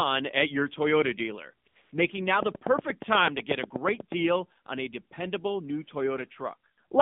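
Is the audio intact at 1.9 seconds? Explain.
No. At 1.9 seconds the sound sits inside a stretch of AMR comfort noise running from 1.82 to 1.92 s, about 100 ms. For that tenth of a second the phone treated the input as silence and sent no speech frames, so the receiver filled the gap with synthetic noise built from a rough sketch of the background's level and spectrum. What you hear is a smooth, even hiss that switches in and out, not the real background. Unlike a packet dropout, there is no dead silence and no repeated fragment, just a clean swap to featureless noise.

The whole clip also passes through the AMR narrowband mobile codec, so this moment is band-limited to roughly 150 Hz to 3.6 kHz, with nothing above 4 kHz. The codec rebuilds sound from a vocal-tract model driven by a few pulses per 5 ms subframe, and the result is plainly buzzy and synthetic. That points to a low bitrate, around 7.4 kbps. 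A simple low-pass filter would only dull the sound. This has the coded, metallic grain on top of the narrow band.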